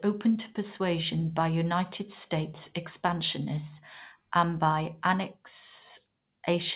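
No technical faults are audible.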